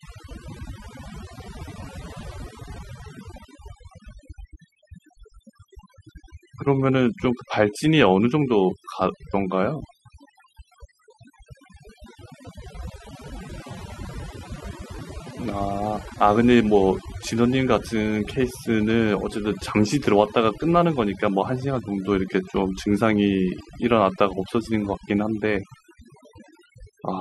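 Overdone noise removal runs through the whole recording. A noise reducer pushed too hard is cutting individual frequency bands whenever they sit close to its noise estimate, taking the quieter parts of the voice along with the noise. The background drops and breaks up into twinkling artefacts.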